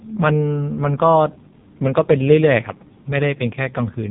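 From start to finish the speech carries AMR narrowband mobile codec damage. Nothing above 3.8 kHz survives, and the pulse-driven vocal-tract model leaves a heavy buzzy, synthetic edge, which fits AMR-NB's 5.15 kbps mode. A plain low-pass filter would dull the sound without that robotic grain.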